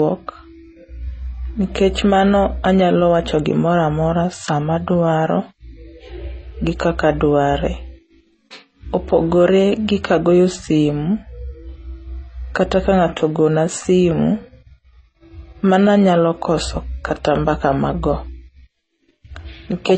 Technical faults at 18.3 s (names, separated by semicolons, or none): transcoding between lossy codecs